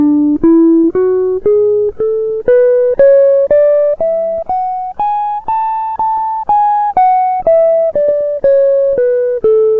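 At 0.80 to 0.86 s a short concealed packet loss occurs: about 40 ms of audio failed to reach the decoder in time, and the receiver bridged the hole by extending the preceding sound for roughly 40 ms before blending back into the real signal. In the music this registers as a brief smear or wobble. The same fault returns at 6.16 to 6.19 s, this time with a shorter patch of about 16 ms, again heard as a brief smear.

At 8.03 to 8.13 s a burst of packet loss removes a stretch, with about 40 ms missing outright. The receiver carried the last sound forward for about 48 ms, fading it as the gap continued, so it comes across as a held, dying sound. Playback then picks up about 12 ms further along, skipping a small piece of the music. The call path's G.722 codec, whose sound fits a 64 kbps setting, leaves nothing above 8 kHz throughout.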